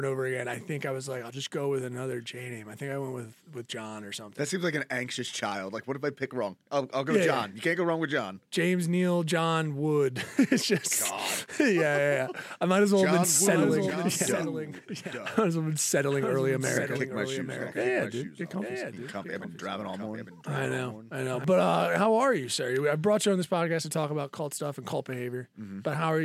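From 13.30 s to 21.44 s there's a doubled audio track: a second full-band copy of the sound trails the original by about a second, sitting roughly 10 dB lower. It has no decay or room colour, just a clean echo of everything, and it cuts in and drops out abruptly at those points. The likely culprit is a slower capture path picking the audio up again, or an edit leaving two copies out of step.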